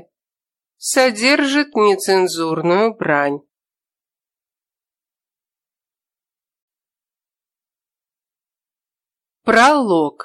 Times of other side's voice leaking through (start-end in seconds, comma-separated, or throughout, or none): none